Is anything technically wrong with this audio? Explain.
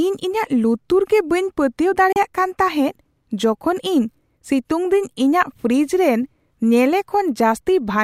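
Yes. From 2.12 to 2.16 s there is a digital broadcast dropout. The receiver briefly muted, likely over one corrupt frame, cutting the speech for 32 ms after a 3 ms fade. The waveform shows a flat gap and the spectrogram a blank vertical stripe.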